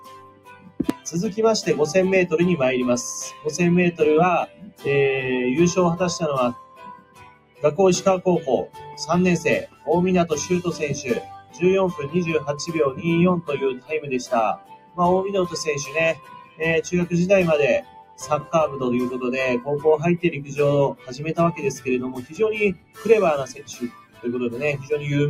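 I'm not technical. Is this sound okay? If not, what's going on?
No. A noise suppressor meant for speech has been left running on this sound, which is the fault called noise suppressor applied to music or sounds. It treats steady tones, lingering tails and room ambience as background noise and keeps pushing them down, while sharp onsets get through. Across the whole clip the level swings noticeably as a result, so the sound pumps and thins out instead of sustaining naturally.

The clearest moments are where the sound is cut by the noise suppressor, meaning the steady or fading parts sink well below everything around them, dropping to a small fraction of their volume at the worst points. This happens at 0.0 to 1.1 s, 3.3 to 4.85 s, 6.53 to 7.64 s, 8.66 to 9.88 s, 11.21 to 16.61 s, 17.81 to 18.53 s and 20.47 to 24.91 s. In those stretches, held sounds fade early and their decays are chopped short.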